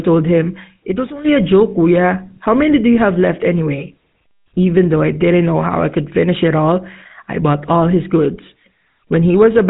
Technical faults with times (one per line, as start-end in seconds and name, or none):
0.00-9.70 GSM full-rate codec
0.52-1.36 loudspeaker feedback squeal